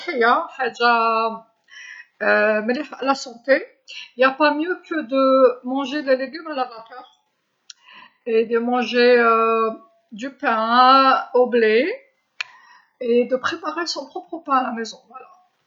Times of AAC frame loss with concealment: none

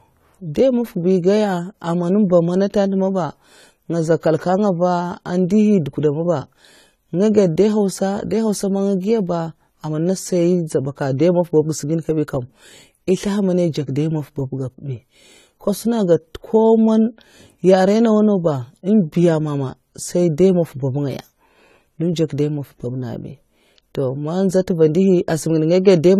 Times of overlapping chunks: none

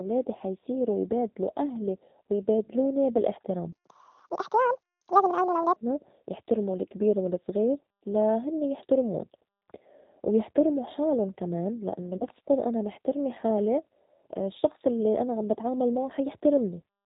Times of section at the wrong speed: 3.72-5.76

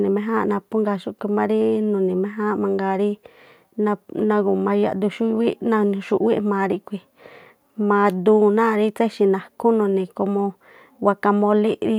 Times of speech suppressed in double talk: none

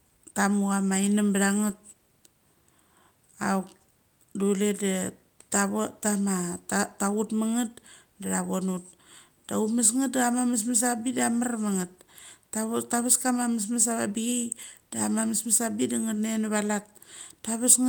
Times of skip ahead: none

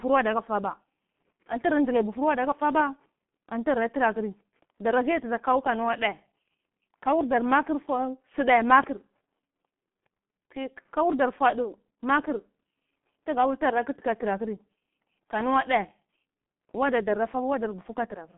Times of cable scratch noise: none

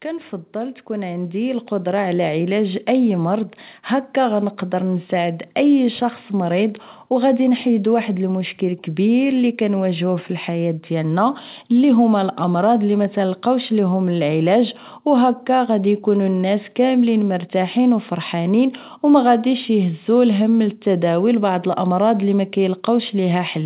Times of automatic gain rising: 0.05-5.54

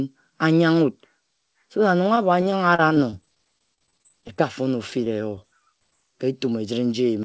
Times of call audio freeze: none

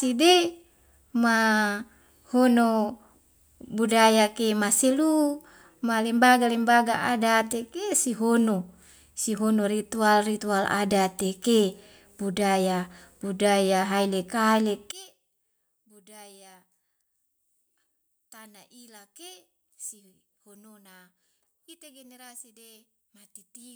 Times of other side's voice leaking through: none

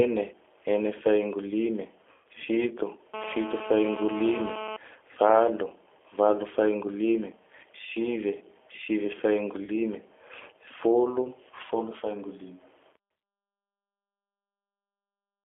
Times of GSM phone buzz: 3.14-4.77

